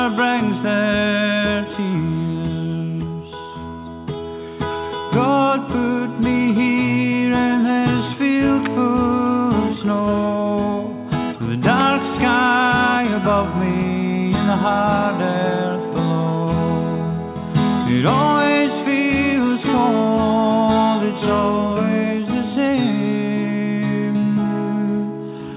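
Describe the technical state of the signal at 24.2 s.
At 24.2 s the audio is intact, with no dropout, glitch or other fault, only the narrowband sound of the call path, which fits a G.711 mu-law codec and leaves nothing above 4 kHz.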